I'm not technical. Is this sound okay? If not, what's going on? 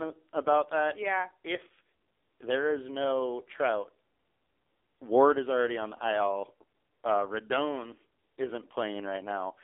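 No. The whole recording went through an AMR narrowband mobile codec, the squeezed format old mobile networks use, cut hard. Nothing above about 3.7 kHz survives, so the speech sounds thin, muffled and phone-like, with a buzzy, synthetic edge throughout.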